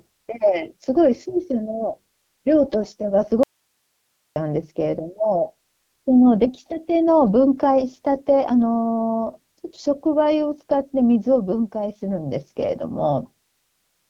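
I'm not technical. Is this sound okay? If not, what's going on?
No. The whole clip has been through an AMR wideband (HD Voice) codec, the kind used for phone calls, set to one of its low-quality modes. The speech sounds rough and raspy, and nothing above about 7.4 kHz survives, so it lacks crispness.

There's also an audio dropout to a faint residue from 3.43 to 4.36 s. The speech cuts out abruptly for almost a second, leaving only quiet hiss, then snaps back. The likely cause is the signal getting lost while the rest of the chain kept running.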